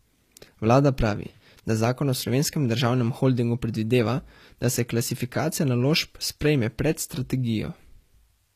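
From start to finish the speech carries plainly audible HE-AAC compression, most likely from a low-rate stream around 24 kbps. The treble is synthetic: s sounds come out gritty and lispy, with a metallic sheen, because the upper band is copied up from lower frequencies rather than coded. Unlike a plain low-pass, the top stays present right up to a hard ceiling near 14.9 kHz, just with the wrong texture.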